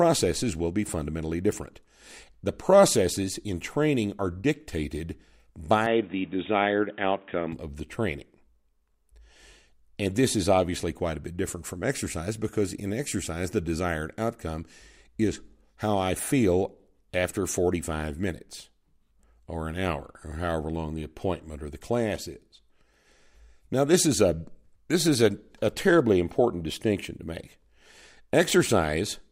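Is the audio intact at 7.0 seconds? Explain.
No. From 5.86 to 7.52 s the speech turns dull and boxy, with nothing above 3.8 kHz and a faint new background hiss, until it clears just before "of the training". The likely cause is the input switched to a poorer, narrower-band device.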